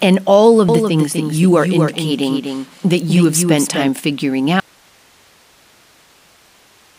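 A second copy of the speech was likely mixed in from a slower capture path or a misaligned edit, giving a doubled audio track from 0.69 s to 3.89 s. That copy trails the original by roughly 300 ms at about 5 dB lower, full-band and with no room tail, so every syllable is followed by a dry, slightly quieter repeat. The echo appears and vanishes abruptly at those two points rather than fading in or out.

At 4.6 s the wanted signal was likely lost while the downstream path stayed open, producing an audio dropout to a faint residue that lasts to the end of the clip. The speech cuts off sharply mid-flow rather than trailing into a pause, and what remains is steady hiss sitting about 35 dB below the earlier speech level, with nothing of the speech returning.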